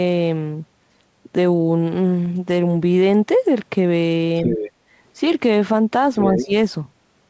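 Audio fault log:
4.45–4.71 s and 6.19–6.45 s, other side's voice leaking through: a second voice slips in just a bit quieter than the talker, likely loudspeaker echo the canceller didn't fully remove.
6.38–6.53 s, speech suppressed in double talk: the talker dips by roughly 15 dB for a brief moment while the leaked voice overlaps, likely the canceller turning both down.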